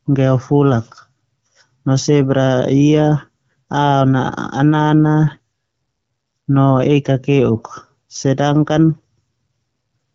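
It's a speech recording carried over an AMR wideband (HD Voice) link at 12.65 kbit/s, a rate where that codec keeps speech clear, and there's nothing technically wrong here to point at.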